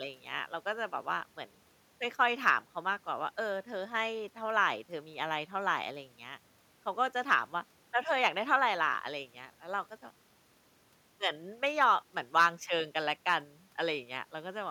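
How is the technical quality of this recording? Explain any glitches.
The recording has no technical glitches; the signal comes through without any dropouts, clicks, distortion or other interruptions.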